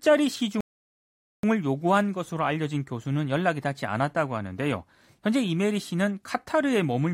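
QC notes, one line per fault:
0.61–1.43 s, rebuffering stall: the speech drops to silence for 0.83 s while the player waits for data, then resumes exactly where it stopped, with nothing lost.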